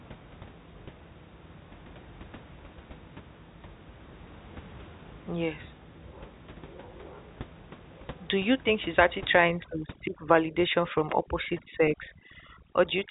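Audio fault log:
9.35 to 13.10 s, overdone noise removal: after "you think she's actually" the room noise drops and breaks up into twinkling specks, as over-strong noise reduction shuts off frequency bands near its noise estimate, quiet speech parts included.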